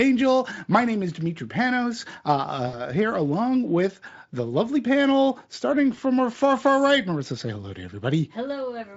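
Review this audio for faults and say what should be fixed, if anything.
VoIP packet loss concealed by the speech codec affects the sound twice: from 2.67 to 2.79 s, a gap of about 60 ms that fits roughly three lost frames, and from 5.95 to 5.99 s, fitting a single lost frame. The decoder extrapolates from its last pitch and filter while lowering the gain, so the sound smears into a fading buzz or coloured noise. Because each frame builds on the last, the weakness lingers after packets resume. On a spectrogram, the frozen spectrum dims, and the waveform shows a decaying envelope. A jitter buffer with forward error correction or redundant frames would prevent these dropouts.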